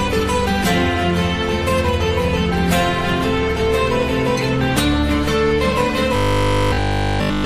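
Robotic sound from repeated short buffers runs from 6.16 s to the end at 7.45 s. Here the sound collapses into a hard, metallic buzz fixed at 50 Hz, which points to a repeated chunk about 20 ms long. The likely cause is audio arriving too late, so playback loops the last short fragment in place of fresh material. Essentially all of this stretch is repetition, leaving a rigid drone that only loosely tracks the original sound.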